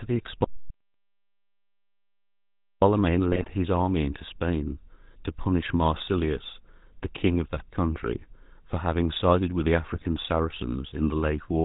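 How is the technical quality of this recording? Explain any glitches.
The technical quality is poor, with three distinct problems.

GSM full-rate codec damage runs through the whole recording and is plainly audible. The codec models the vocal tract and excites it with evenly spaced pulses, keeping only a third of the excitation detail. Nothing above 4 kHz survives. The speech sounds buzzy and gravelly, with a dull, band-limited top end. The roughness fits the 13 kbps full-rate GSM codec.

An audio dropout to silence runs from 0.44 to 2.82 s, about 2.4 s in all. The sound stops abruptly and comes back mid-flow. The gap is dead digital silence, with no room tone underneath. Whatever was spoken then is gone. The likely cause is lost input, such as a disconnected device, a failed link or an accidental mute, while recording carried on writing silence.

GSM bit errors strike twice, from 3.32 to 3.51 s and from 9.93 to 10.06 s. 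Corrupted bits reached the speech decoder, as on a weak radio link. Damaged filter, pitch or gain values distort the spectrum or spike the level frame after frame while the bad patch lasts. The speech breaks into squawks, pops and gargling. Each burst is short, and the first is slightly longer, which points to several consecutive frames being hit.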